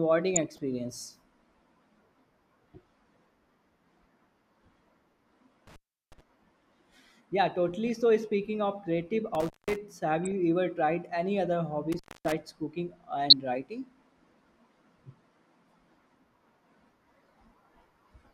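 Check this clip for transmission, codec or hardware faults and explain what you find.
The speech carries two kinds of fault, DAB burbling and an intermittent contact, alternating through the clip.

DAB burbling appears at 0.35–0.58 s, 7.87–7.96 s (just before "speaking of creative"), 10.25–10.32 s (just before "ever tried"), and 13.30–13.33 s. Each is a brief burst of short noise blips riding over the speech. Weak reception lets a small fraction of a percent of bits slip past error correction into the MP2 audio data, so corrupted samples put short noise blips in single sub-bands and corrupted scale factors make sub-bands jump in level for up to a frame.

The intermittent contact occurs at 5.67–6.21 s, 9.35–9.78 s (right after "speaking of creative"), and 11.92–12.32 s. The sound drops out with a crackle at each edge and leaves only faint hiss during the gaps, which last about 0.36 s, 0.19 s and 0.26 s. 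A loose plug or cable is briefly breaking the signal path, and the crackles are the contact scraping as it opens and recloses.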